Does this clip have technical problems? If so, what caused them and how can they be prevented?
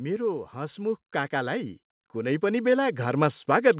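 Yes. Automatic gain rising starts at 0.53 s and runs to the end. The gain control judged the input too quiet, so voice and background swell together. Prevent it by setting a fixed input level.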